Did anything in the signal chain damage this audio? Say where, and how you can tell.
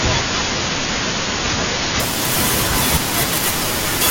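Yes. This is an adaptive stream starting at a low bitrate, a fault at the codec and network stage. From 0.0 to 2.0 s the speech has nothing above 7 kHz and heavier coding artefacts, which fits an AAC stream around 24 kbit/s. At 2.0 s the top end and clarity return abruptly with no gap, consistent with a step up to roughly 96 kbit/s once the player had measured the connection.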